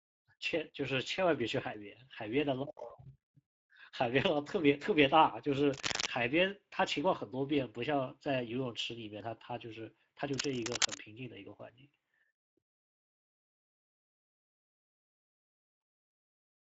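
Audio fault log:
Throughout, Speex codec: the speech sounds hoarse and grainy, with plainly audible codec damage and nothing above 7.7 kHz. The damage fits a Speex stream at around 16.8 kbps, where the excitation gets few bits and the upper band becomes noise-like fill.
5.72–6.07 s and 10.34–11.00 s, cable scratch noise: dense, uneven scratching and rustling bursts sit over the speech at about the same loudness. This is likely a worn cable or connector being moved, its contact resistance jumping rapidly.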